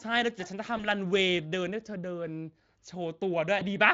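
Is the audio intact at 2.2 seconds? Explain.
Yes, the speech is intact at 2.2 seconds, with no fault at that moment.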